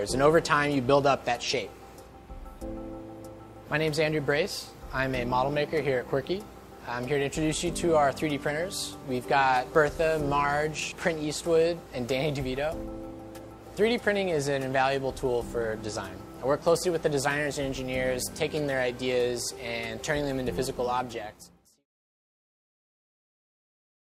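Nothing stood out on listening, apart from an ordinary smooth fade-out that begins around 20.5 s and reaches silence at 21.87 s.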